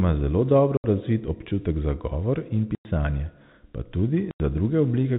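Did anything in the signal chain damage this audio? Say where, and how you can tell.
Yes. The damage happened on the network. Packets went missing, and the receiver played silence in their place instead of concealing the gap. The speech drops out at 0.77 to 0.84 s (70 ms), 2.75 to 2.85 s (100 ms) and 4.31 to 4.40 s (90 ms). Each gap is a multiple of 10 ms, which fits 10 ms packets. The holes start and stop abruptly, with hard edges. Under the gaps, the G.711 telephone coding still cuts the sound off above 4 kHz.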